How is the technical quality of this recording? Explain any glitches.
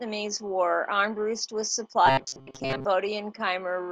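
The recording has one clear glitch, a stretch of robotic sound from repeated short buffers between 2.06 and 2.85 s. The likely cause is new audio arriving too late, so playback kept reusing a tiny slice of about 7.5 ms in place of the missing material, with around 70 percent of that stretch made of such repeats. Looping a slice that short imposes a fixed 134 Hz pitch, so the speech turns into a stiff, metallic buzz that only loosely tracks the syllables.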